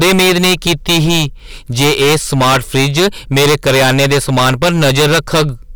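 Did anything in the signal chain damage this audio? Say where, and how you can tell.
Yes: a harsh fuzz sits on every loud syllable throughout. This is hard clipping, with the signal overdriven by about 22 dB at a gain or conversion stage, flattening nearly a third of the samples.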